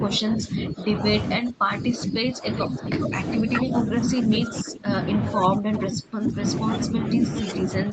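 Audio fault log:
0.0–0.9 s, 1.37–4.9 s, 5.35–6.41 s, 6.89–7.93 s: speech suppressed in double talk. The voice repeatedly dips or breaks up, by about 10, 20, 25 and 10 dB at its deepest. This is likely an echo canceller muting the near talker while the far side also spoke. The waveform shows sagging, notched envelopes, and the spectrogram shows harmonics thinning or vanishing in patches.
2.59–2.67 s, 3.02–3.09 s, 5.35–5.40 s: echo leak. Brief, faint scraps of the voice return about 415 ms late, about 10 dB below the speech. The likely cause is residual loudspeaker echo that the canceller failed to remove. On the spectrogram these appear as short, weak copies of earlier harmonic patterns, and on the waveform as small bursts.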